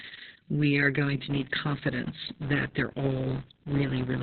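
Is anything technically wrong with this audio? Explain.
Yes, there are two faults. Throughout, the speech carries heavy Opus voice compression at about 6 kbps. The SILK coder has dropped to narrowband, so nothing is heard above about 4.2 kHz. The coarse excitation makes the speech muffled, hoarse and faintly robotic. That roughness is what separates it from a simple low-pass filter, which would dull the sound without the grainy texture.

From 1.3 s to the end, a filter restarted on every block adds a 172 Hz buzz. Each block starts the filter from silence, and the rate points to a 256-sample block. Unlike mains hum, this buzz rises and falls with the speech level and fades in quiet gaps.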